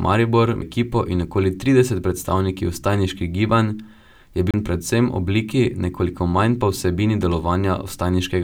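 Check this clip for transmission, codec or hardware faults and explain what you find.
The clip has two CD skips. The first is at 0.61 s, just before "in okoli trideset predstavniki", with a mute of a few milliseconds. The second runs from 4.51 to 4.54 s, just before "predvsem obliki", with a mute of about 30 ms. A knock or a disc flaw threw the laser onto a different turn of the spiral. The player muted briefly and resumed elsewhere. Each skip is heard as a tick and an abrupt jump in the sound.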